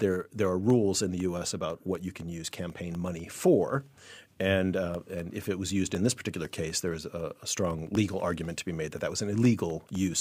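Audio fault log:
0.20–9.95 s, periodic USB or driver dropouts: something repeatedly stalls the USB bus or audio driver every 0.25 s, dropping about half a millisecond of speech to silence around forty times, so a steady train of small ticks rides on the speech.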